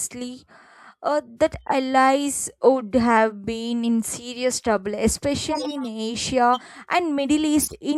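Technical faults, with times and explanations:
1.62 to 1.73 s, 5.51 to 5.88 s and 7.60 to 7.75 s, corrupt frame decoded: right after "uh that" and again after "been in serious trouble" you get a chirpy, noisy burst, and once more near the end. Flipped bits in a few compressed frames (around three, then seven, then three) left the decoder rebuilding them with wrong gains and codes, so energy lands at odd frequencies for roughly each damaged frame's length. The bursts get louder as the clip goes on, the last one peaking quite hot at around -5 dBFS.
6.53 to 6.61 s, compressed frames skipped: the sound jumps forward by about 40 ms, which fits frames dropped because they were missing or refused as damaged.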